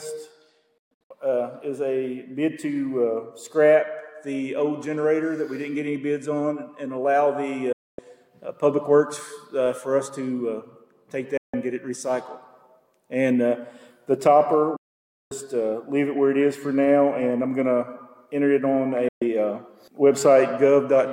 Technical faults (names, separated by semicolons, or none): digital broadcast dropout